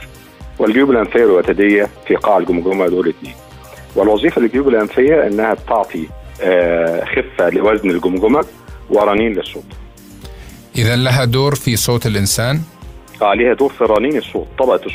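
At 8.00 s, CD scratch ticks begin and run to 9.35 s. Nine ticks arrive at about seven per second, each only a few milliseconds long. A blemish on the disc wipes out more data than error correction can rebuild, once per revolution. The player then patches or mutes the damaged samples, leaving brief clicks. A second burst follows at 13.96 s, ending at 14.80 s. Six ticks come at a similar rate; the longest runs slightly longer, around five milliseconds.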